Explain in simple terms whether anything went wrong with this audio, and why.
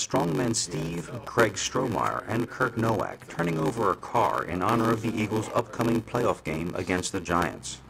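A block size mismatch (padded) runs through the whole clip. One stage hands over shorter chunks than the next stage expects, which fits a 512-sample read block. The leftover space is filled with silence. Those tiny gaps repeat about 94 times a second and make a steady buzz. They also stretch everything to about 0.86 times normal speed, while the timbre stays about the same.

At 1.27 s there is a sharp snap on top of the sound. This is an electrical switching spike. It is likely caused by a nearby switch, motor or static discharge sending a brief electrical jolt into the audio line.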